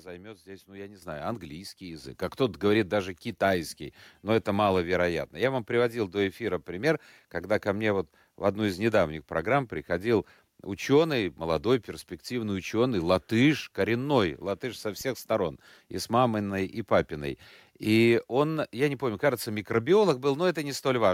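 At 1.02 s, just after "здесь ну я не", the speech and the room behind it jump up together by about 9 dB, and at 2.04 s they rise again by about 6 dB. This is the microphone volume stepped up: the call software judged the input too quiet and raised the device's gain in abrupt steps.

From 15.01 to 15.11 s, between "латыш коренной латыш со" and "сторон и с маминой", a deep thump dies away within about 23 ms. This is a phantom power thump: a supply switched on or off on the live input, and the voltage step passed through the coupling capacitors.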